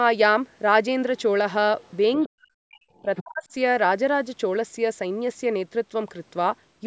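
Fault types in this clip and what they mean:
Other side's voice leaking through, at 1.18–1.22 s, 1.81–1.93 s, 2.17–2.28 s and 2.96–3.23 s: brief scraps of a second voice sit under the speech. This is likely loudspeaker sound reaching the microphone that the echo canceller failed to remove. The first two are very faint, about 35 dB below the talker. They grow louder, to about 25 dB down at 2.2 s and only about 15 dB down by 3 s.
Speech suppressed in double talk, from 2.26 to 3.53 s: the talker's level is pulled down, for about a second in total. At its deepest it falls by around 40 dB. The leaking voice overlaps this stretch, so the likely cause is an echo canceller that heard both voices at once and pulled down the whole signal, near-end speech included.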